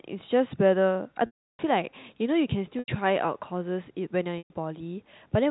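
Packet loss with pitch repetition occurs at 1.26–1.59 s, 2.79–2.88 s and 4.38–4.50 s. The last pitch period loops over each gap, producing a brief buzzy hold, while the 330 ms gap fades into silence.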